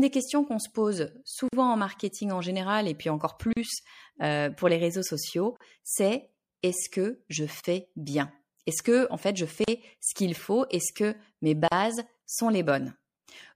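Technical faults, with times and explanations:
Throughout: MP3 compression. The speech sounds watery and swirly, with sibilants turning metallic and consonant attacks smeared. This points to a low bitrate, around 64 kbps. Short of bits, the encoder likely cut the treble at a fixed frequency. It dropped weak frequency lines, which flicker on and off between frames. That flicker gives the swirl, and the missing top end dulls the voice.
1.48 to 11.72 s: gap at a join of encoded pieces. Six brief silences break the continuous speech, every 2.0 s. They fall at 1.48, 3.53, 5.57, 7.60, 9.64 and 11.68 s. The first lasts 45 ms, just before "en marketing en général". The rest last about 38 ms each, including one after "général et puis encore" and one after "que mes". The edges are smeared. The speech resumes where it stopped. Separately encoded pieces were joined untrimmed. Each kept its start-up delay and end padding as silence.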